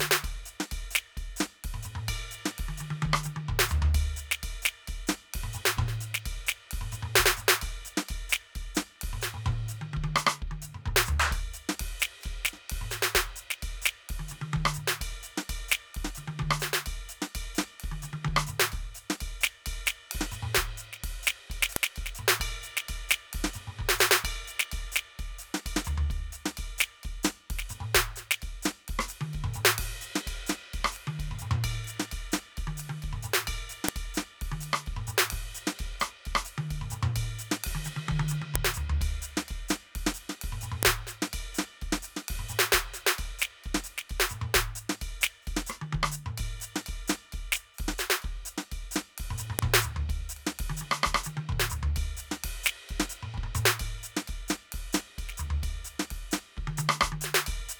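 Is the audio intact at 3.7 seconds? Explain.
Yes, the music is intact at 3.7 seconds, with no dropout, click, distortion or other fault heard at that moment.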